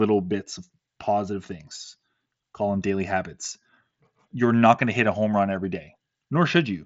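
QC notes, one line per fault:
The speech arrives over a wideband Bluetooth headset link with its mSBC codec working as expected, content stopping at about 7.7 kHz and only a light codec graininess that fits a 61 kbps stream.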